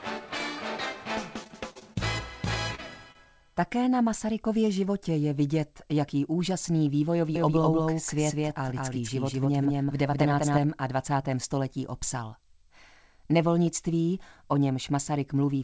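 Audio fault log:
1.44–1.97 s, repeated packet loss (robotic sound): The audio turns choppy, with five short holes, the longest 39 ms, so about a fifth of this stretch is patched. Each gap is filled by stretching the preceding sound before the next dropout arrives.
2.75–2.80 s and 3.12–3.17 s, short concealed packet loss: Each spot has a brief smear or wobble where about 20 ms of audio never arrived in time. The receiver bridged each hole by extending the last sound, then blended back into the real signal.
7.36–10.58 s, doubled audio track: A second, equally loud copy of the full-band sound trails the original by about a fifth of a second, giving a dry slapback with no room tail. It cuts in and out abruptly, likely from the signal being captured twice through a slower path.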